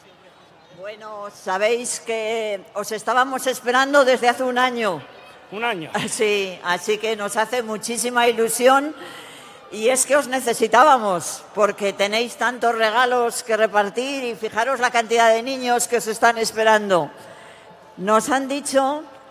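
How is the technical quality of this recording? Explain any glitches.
No technical faults or glitches can be heard anywhere here.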